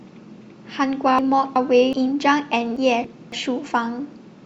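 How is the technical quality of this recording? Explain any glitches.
The speech has two reordering glitches. Frames out of order at 1.19 to 1.93 s and 2.77 to 3.32 s: adjacent blocks of about 371.5 ms and 278.6 ms were decoded swapped, so each stretch plays its halves exchanged, a garbled flutter, though no time is lost.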